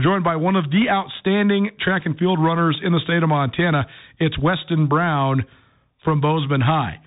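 From start to finish the speech carries Bluetooth CVSD headset codec damage, and it is plainly audible. Nothing reaches above about 3.8 kHz, so the sound is dull and boxed in. The codec sends one bit per sample at 64 kHz, just an up or down step. The step size adapts, but not fast enough. Loud, bright moments outrun it and distort. The s sounds come out scratchy. A grainy hiss sits under the speech.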